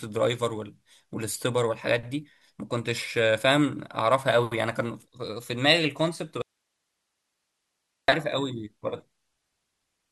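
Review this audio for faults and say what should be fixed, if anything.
Audio dropout to a faint residue, 6.42 s to 8.08 s: the speech cuts off abruptly and about 1.66 s of signal is lost. Rather than true silence, the gap holds only a low hiss, around 55 dB below the speech level. Because the path after the break stays live while the wanted signal vanishes, the likely cause is a momentary disconnection or signal loss upstream of a still-active input stage. The speech then returns just as suddenly. To prevent it, secure and check cables, connectors and any wireless link before recording, and monitor the feed continuously so a loss can be caught and retaken.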